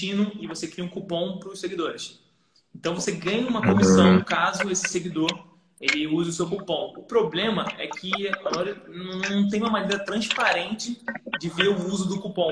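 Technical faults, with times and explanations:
No technical faults can be heard anywhere in the clip. Nothing at any point calls for a time or an explanation.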